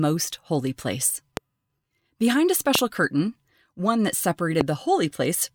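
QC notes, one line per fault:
1.37–1.39 s, 2.75–2.77 s, 4.61–4.63 s: loud pop. Single sharp pops, about 20 dB above the speech (the last about 15 dB), likely from voltage spikes. The speech continues underneath.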